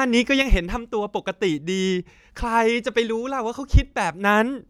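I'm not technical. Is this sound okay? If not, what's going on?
No. At 0.42 seconds the speech suddenly gets quieter, and it stays that way to the end. This is called a sudden gain jump. The volume changes in one instant instead of fading smoothly. The background noise drops at the same moment, so the whole sound steps down together. The likely cause is a volume setting being changed inside the recording chain with no gentle transition.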